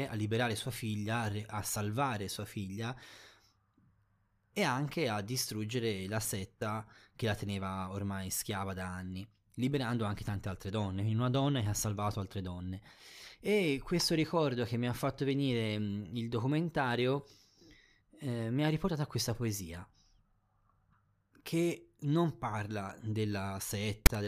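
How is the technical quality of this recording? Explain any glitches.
The recording has one clear glitch, right at the very end. From 24.06 to 24.08 s there is a short, hard-edged burst of static. This is file tags played as audio. A block of text metadata, followed by zero padding, was read by the player as if it were sound samples. The text bytes produce a loud rasp pushed off to one side of the waveform. The padding that follows drops to dead silence.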